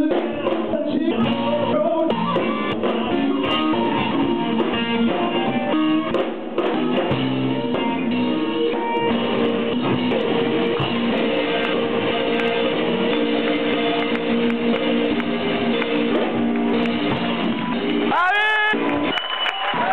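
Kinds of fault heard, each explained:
No technical faults are audible anywhere in the audio.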